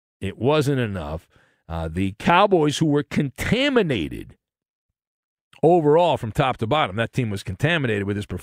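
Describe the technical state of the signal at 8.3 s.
The speech signal at 8.3 s is intact, with no audible fault at that moment.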